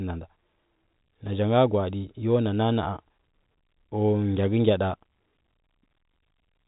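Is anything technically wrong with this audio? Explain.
No, nothing's wrong here, it's just speech carried over ordinary G.711 telephone coding, so the sound tops out around 3.8 kHz the way a landline call normally does.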